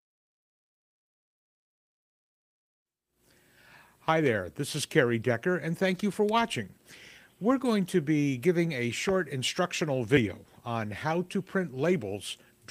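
Nothing technical goes wrong anywhere in this clip, so there's nothing to flag here at all.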